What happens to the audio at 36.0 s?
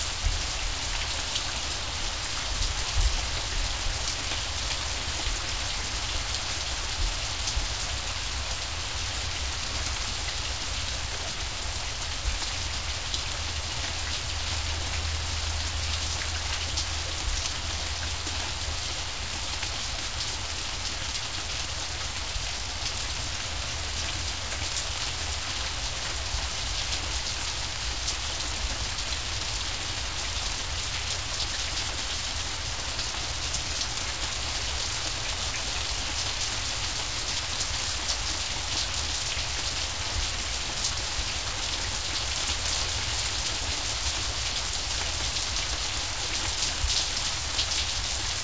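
At 36.0 s the audio is intact, with nothing going wrong there; the sound carries on with the same band limit at 8 kHz that runs through the whole call path.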